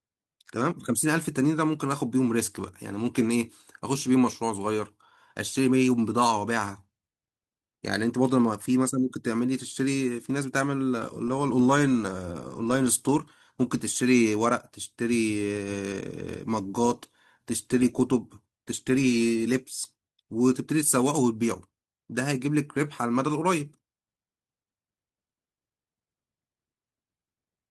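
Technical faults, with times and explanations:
Nothing stood out as a technical fault on listening through the recording.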